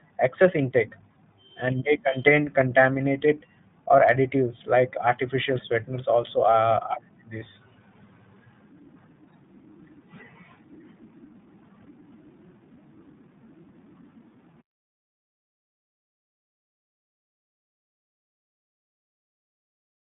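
Throughout the speech runs through the iLBC codec, each 20 ms frame coded on its own, which fits the 15.2 kbps mode. The line passes only about 150 Hz to 3.7 kHz, so it sounds boxed-in, plainly rough and synthetic. A spectrogram shows a hard ceiling near 3.7 kHz.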